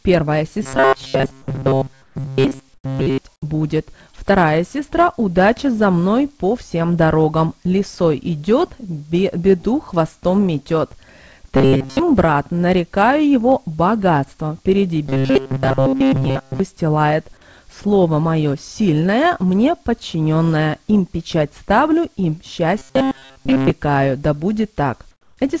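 Audio likely arrived too seldom from 0.63 to 3.18 s, so short buffers of roughly 7.5 ms were replayed in place of most of the real audio. This is robotic sound from repeated short buffers, a rigid metallic buzz fixed at 134 Hz. Inside that stretch, at 2.02 to 2.16 s and 2.74 to 2.84 s, the sender likely stopped transmitting during pauses. Comfort noise in place of the background fills those gaps: steady, smoother noise about 8 dB quieter than the real background. At 4.12 s, 20 ms of audio never reached the decoder, and short concealed packet loss extended the preceding sound for 14 ms, leaving a brief smear. The robotic buzz at 134 Hz returns at 11.57 to 11.99 s, 15.06 to 16.60 s and 22.78 to 23.70 s, again likely from starved buffers. From 25.11 to 25.37 s, comfort noise likely replaces the background once more, about 7 dB lower and smoother. Throughout, nothing is heard above 8 kHz, which fits a G.722 call codec.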